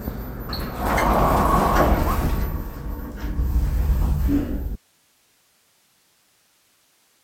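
The signal path likely lost its input at 4.76 s while the chain after the break stayed live, producing an audio dropout to a faint residue: the sound cuts off abruptly and, through to the end of the clip, only hiss remains, roughly 40 dB below the former level.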